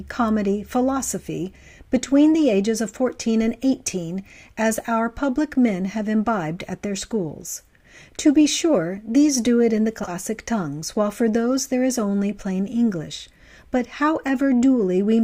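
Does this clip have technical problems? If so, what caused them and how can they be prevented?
Yes. Between about 9.99 and 10.11 s, two neighbouring runs of frames are out of order: two 40 ms blocks, each of two frames, were decoded in swapped sequence. The short stretch plays with its halves exchanged, giving a garbled flutter. No time is lost. Preventing it means tracking sequence numbers and reordering frames in a jitter buffer before decoding.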